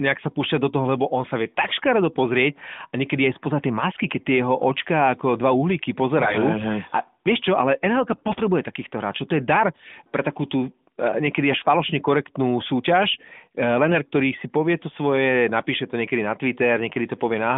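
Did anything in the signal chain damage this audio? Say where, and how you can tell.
Yes. AMR bit errors on the radio link hit 6.22–6.37 s, 8.12–8.41 s and 13.86–13.97 s. Pitch and level hold, but the sound turns hoarse and gargly, worst at 8.12 s. Flipped low-priority bits misplace excitation pulses and skew fine gain and spectrum values.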